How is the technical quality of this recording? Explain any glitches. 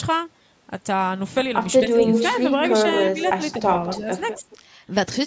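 The recording has two recurring glitches between about 1.8 and 4.6 s: the talker's level repeatedly drops, and a delayed copy of a voice is audible. The bandwidth stops at 8 kHz, consistent with normal call microphone processing.

Speech suppressed in double talk occurs at 1.82–2.23 s, 2.82–4.06 s and 4.39–4.64 s. The talker dips by about 15 dB in the first stretch and about 10 dB in the others, for brief pieces totalling roughly 0.15, 0.3 and 0.15 s. On a waveform these show as sudden notches in the envelope. On a spectrogram they appear as short, darker vertical gaps. The likely cause is an echo canceller that turned down the talker along with loudspeaker echo.

Echo leak occurs at 1.99–3.55 s and 3.9–4.58 s. A copy of the voice returns 221 ms late, about 5 dB below the speech in the first stretch and about 15 dB below in the second. A spectrogram would show duplicated harmonic patterns shifted right. 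This is likely residual loudspeaker echo passing the canceller.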